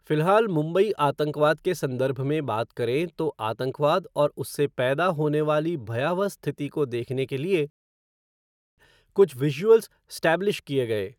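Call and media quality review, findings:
Rebuffering stall at 7.7 s, playback drops to silence for about 1.08 s, then picks up exactly where it left off. Player buffer ran dry; nothing lost, just time added.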